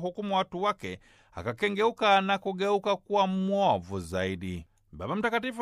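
No technical fault can be heard anywhere in the audio. Nothing in the sound points to a problem in how it was captured, carried or played back.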